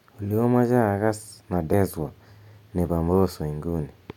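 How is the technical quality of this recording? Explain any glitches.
One glitch stands out: at 1.72 s the speech is interrupted by a very brief blip from damaged data in the compressed stream. A stretch of the encoded data arrived corrupted, so the decoder could not interpret the affected frame, lost its place in the bitstream and had to hunt for the next valid frame header before resuming. The result is a momentary glitch lasting well under a twentieth of a second, after which the speech continues.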